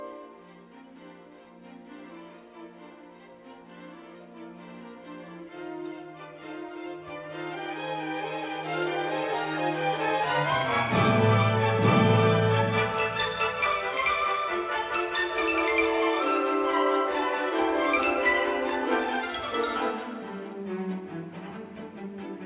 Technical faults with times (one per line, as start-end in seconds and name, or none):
none